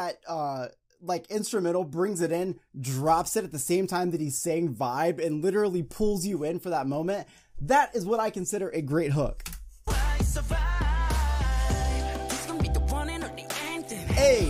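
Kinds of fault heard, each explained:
Nothing stood out on listening; no problem could be heard anywhere in the recording.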